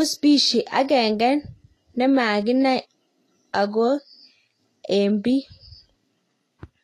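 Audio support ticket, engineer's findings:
Likely Vorbis compression at low quality across the whole speech clip. Encoder has coarsely quantised the high-frequency residue above its smooth spectral floor, and nothing remains above 14.2 kHz, which fits a stream of around 30 kbps. Symptom throughout: plainly audible codec damage, with hissy, grainy treble where fine detail has turned to noise of similar energy, roughened tonal quality and softened consonant attacks. Fix: re-encode from source at higher quality.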